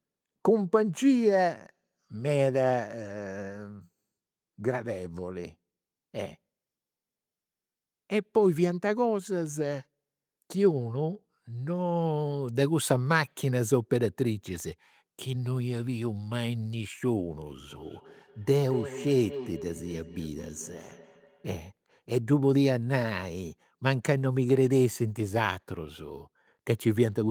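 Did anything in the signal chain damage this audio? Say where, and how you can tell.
Yes. Feedback echo between two devices, a call-processing fault, runs from 17.7 to 21.47 s. Speech returns roughly every 200 ms, at about 13 dB below the speech, showing as evenly spaced copies on the spectrogram. A second device replays this microphone's signal, which is picked up again. Neither echo canceller removes the other device's playback.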